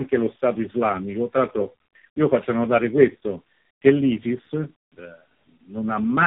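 Across the whole clip, tandem speech coding is at work: the speech passed through three low-rate speech codecs in a row, each one decoding and re-encoding the already degraded output of the last. The character points to a chain ending in AMR-NB. The stacked errors make the speech rough, muffled and warbly throughout, and nothing is left above about 3.8 kHz, which gives it a narrow telephone-band dullness.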